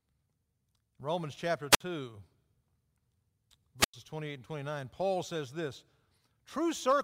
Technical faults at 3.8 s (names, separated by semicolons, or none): wireless microphone squelch dropout